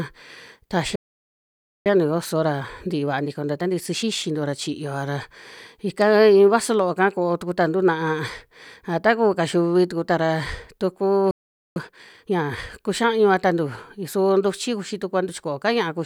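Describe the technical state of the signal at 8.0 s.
At 8.0 s the speech signal is intact, with no dropout, clipping, distortion or other audible fault at that point.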